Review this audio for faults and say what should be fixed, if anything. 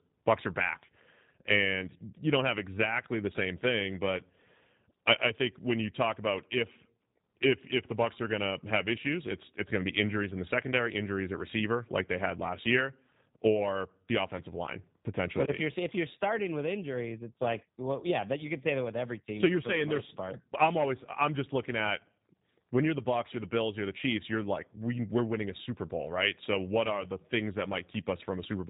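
G.729 codec damage runs throughout. Speech rebuilt from sparse pulses sounds rough and synthetic. Nothing passes above 3.8 kHz, pointing to 8 kbit/s G.729A. To prevent this, record or route the call through a wideband codec at a higher bitrate.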